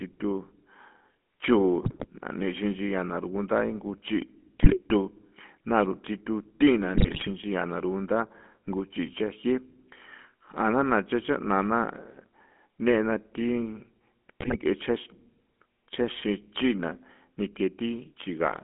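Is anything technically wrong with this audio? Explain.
Yes. The whole clip carries the GSM full-rate codec. The speech sits in a narrow line band of roughly 200 Hz to 3.5 kHz. On top of that narrow band the voice has a buzzy, gravelly roughness, which fits a 13 kbps GSM full-rate stream. The codec rebuilds speech from a vocal-tract model driven by sparse, regularly spaced pulses, and that coarse excitation is what causes the grit. A plain telephone band-limit would sound muffled but smooth, whereas this damage is plainly audible as texture.

There are GSM bit errors at 1.8 to 2.07 s, 4.62 to 4.79 s, 6.94 to 7.31 s and 14.40 to 14.56 s. During each burst, corrupted filter, pitch or gain values reach the decoder, so short stretches of the frame-by-frame reconstruction bend into the wrong spectrum or jump in level. The speech breaks into squawks, pops and gargling. Packet loss would leave gaps or smeared repeats instead, so the loud, distorted outbursts point to bit errors.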